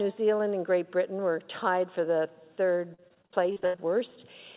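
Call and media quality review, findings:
Choppy, robotic stretch from 2.94 to 3.80 s, pieces missing. Repeated packet loss in the jitter buffer/concealment stage: about a dozen holes, longest 80 ms, roughly 40% of the span patched by extending prior sound. Narrowband, nothing above 4 kHz.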